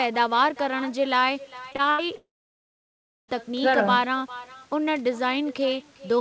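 Throughout the clip, an echo with no canceller is present. The far end is feeding its loudspeaker back into its own microphone, and nothing strips that signal out before it returns. Each phrase is therefore trailed, roughly four tenths of a second later, by a copy about 18 dB quieter. That copy sounds thinner than the original in this G.722 call. Both the direct sound and its echo stop at about 8 kHz.

From 1.70 to 2.10 s, repeated packet loss (robotic sound) sets in. Audio keeps failing to arrive in short bursts, about half a dozen times, and the receiver patches each hole by stretching the last bit of sound it received. Those patches cover about 41% of the stretch, and the longest single hole is around 80 ms. The speech turns choppy, with small pieces missing between the patched fragments.

Almost immediately afterwards, from 2.16 to 3.30 s, comes what is likely a long network dropout. 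The stream stops entirely for over a second. The receiver extends the last sound into a brief fading buzz for roughly a tenth of a second, then gives up, leaving about 1.0 s of silence. When the speech resumes, the portion that was never delivered is simply gone and is not replayed.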